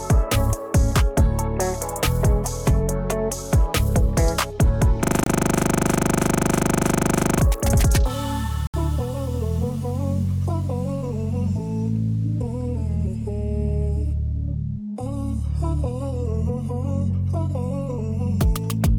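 From 5.04 to 7.39 s the sound locks into a rapid, rattling buzz: one 40 ms fragment repeats exactly, 25 times a second, 58 times in all, and about two seconds of audio never comes back. This is a system hang loop. The computer or its audio driver froze, but the sound hardware kept replaying the same small stretch of its ring buffer until the system recovered.

Inside that loop, from 5.24 to 5.27 s, there is a 27 ms gap of silence, and at 8.67 to 8.74 s a longer 69 ms dropout cuts the sound before it resumes. Each is likely a Bluetooth stall. Radio interference delayed packets, so the headphones' small buffer emptied and playback went quiet until the delayed or resent data arrived.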